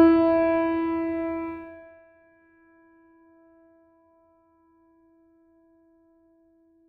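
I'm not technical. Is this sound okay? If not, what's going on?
No. There is zipper noise from about 1.49 to 2.04 seconds, as the music is turned down to a much quieter level. Instead of gliding smoothly, the volume drops in a rapid staircase of tiny jumps, roughly seventy every second. Each jump leaves a little click, and together those clicks make a fast ticking or zipping sound layered over the music while it fades.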